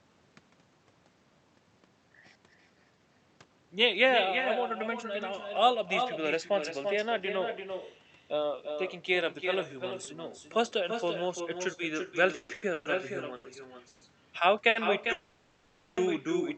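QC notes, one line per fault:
Throughout: echo with no canceller. Every phrase is followed roughly 300 ms later by a thinner copy about 7 dB quieter. The far end's loudspeaker is feeding its microphone and nothing removes it. On a spectrogram each syllable's harmonics reappear as a fainter, smeared shadow offset in time.
12.32–12.86 s: repeated stalls (stutter). Four separate waits, the longest 140 ms, were filled with about 360 ms of continued sound, roughly two thirds of the span. The jitter buffer kept running dry, so the audio drags and hiccups. The waveform shows repeated flattened, looping stretches, and the spectrogram shows frozen harmonic bands.
13.36–13.45 s and 14.69–14.76 s: short stall from a late packet. One sound is held 80 ms and another 60 ms too long, each with a slight buzz or dip, while the receiver waited for a late packet. Each appears as a brief horizontal smear of steady partials, then normal texture resumes.
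13.88–14.02 s and 15.12–15.98 s: call audio freeze. The sound locks into a fading buzz or hiss for 130 ms and then for 850 ms before carrying on where it stopped. It never drops to silence. This likely comes from packets held up in transit. The spectrogram shows stretched, decaying bands, and the waveform a tapering envelope.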